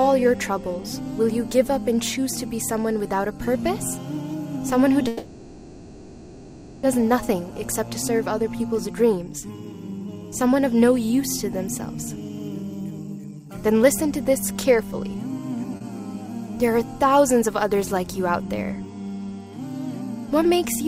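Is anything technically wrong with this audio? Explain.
Yes. The audio has a long hold-and-resume, two stretches of hurried playback, and one brief stretch of held sound.

From 5.07 to 6.84 s there is a call audio freeze. The last sound carries on for about 1.8 s as a buzz or hiss that fades without reaching silence, then the audio resumes exactly where it stopped, with nothing lost. The likely cause is packets held up in transit, which left the jitter buffer empty while the receiver filled the wait. On a spectrogram, the final spectrum smears into a flat, decaying band. The waveform shows a repetitive, shrinking tail.

Jitter buffer speed-up occurs twice: from 8.72 to 10.74 s at 109% speed, trimming about a fifth of a second, and from 12.29 to 15.75 s at 107% speed, trimming around 0.3 s. A backlog of audio built up, so the receiver cut many short pitch-period slices to catch up. The sound runs quicker and feels hurried while the pitch stays the same. 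Harmonics stay level on a spectrogram, but events are compressed in time. The waveform shows tiny, regular splices.

A short stall from a late packet follows at 15.77 to 15.82 s. A packet arrived late, so the receiver stretched the current sound by about 40 ms before continuing from the same point, with nothing missing. The sound is held slightly too long, with a slight buzz or dip. A spectrogram shows a short frozen column, and the waveform shows a few repeated cycles.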